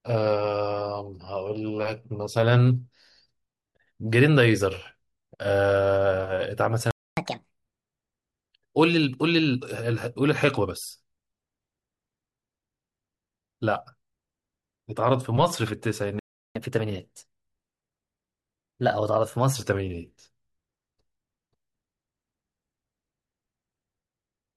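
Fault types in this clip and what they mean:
Playback stall: speech drops to silence for 0.26 s at 6.91 s and 0.36 s at 16.19 s, likely from the player running out of data.
Catch-up at higher speed: after each gap, speech runs fast with raised pitch, 1.5 times for half a second, then 1.1 times for 3 s.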